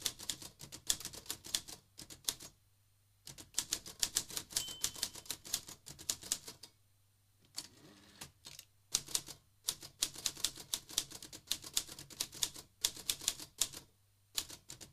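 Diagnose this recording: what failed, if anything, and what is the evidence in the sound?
Nothing failed here, and the sound gives no evidence of a fault at any stage of the recording.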